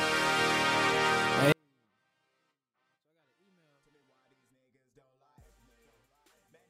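At 1.52 s the audio falls away abruptly and stays nearly inaudible to the end of the clip, with no added distortion or noise, just a sudden level drop of about 48 dB. That is the signature of a 24-bit alignment error (too quiet): samples held as 24-bit integers in the low bytes of a 32-bit word are being read as full 32-bit integers, so every value sits 8 bits too low in magnitude.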